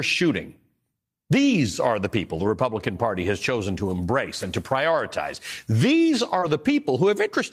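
Lost packets rebuilt from error correction occur at 2.35 to 2.45 s, just after "are the people", and at 3.57 to 3.59 s, just before "to embrace and to". The decoder substituted low-bitrate copies carried in the following packets, so there is no gap. These stretches sound rougher and noisier, and the first spans about 60 ms, which fits three separate 20 ms packets.

Short concealed packet loss follows at 6.39 to 6.44 s. About 20 ms never arrived, and the receiver extended the preceding sound for about 22 ms before blending back, producing a brief smear. Within that stretch, at 6.42 to 6.44 s, a further lost packet was rebuilt from error correction, adding the same rough, noisy texture.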